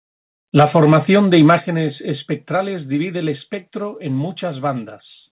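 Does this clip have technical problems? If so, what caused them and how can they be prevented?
Yes. From 0.56 to 1.54 s the loudest syllables carry a harsh, crackling edge: this is microphone overload, likely from an input level set too high, driving peaks about 4 dB past the converter's ceiling so their tops are flattened on a small share of samples. Unlike codec distortion, the crackle tracks the peaks and vanishes between them, and the narrowband sound, with nothing above 4 kHz, stays the same throughout. Setting the microphone gain so peaks stay well below full scale prevents it.

At 1.6 s the microphone volume steps down: speech and background drop together by about 6 dB in one abrupt jump, right after the distorted stretch ends. The likely cause is the call software reacting to the clipping by cutting the device's input volume. A fade or a compressor would move gradually or follow each syllable, but this is a single instant step that then holds. 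Fixing the input level beforehand, or turning off automatic gain adjustment, avoids it.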